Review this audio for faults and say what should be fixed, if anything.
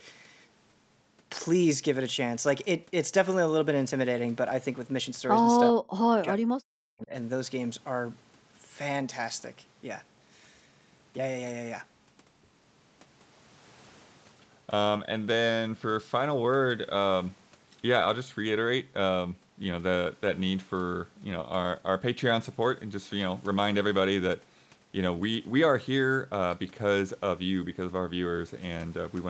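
From 5.76 to 7.12 s the speech drops away, by around 40 dB at its deepest. The likely cause is speech suppressed in double talk. The echo canceller took the talker for loudspeaker echo and turned it down. Better double-talk detection would prevent this.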